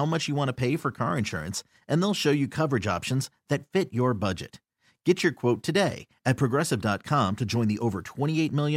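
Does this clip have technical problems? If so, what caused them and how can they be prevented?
No, the speech signal shows no technical faults, so nothing in this recording needs a cause traced or a prevention step.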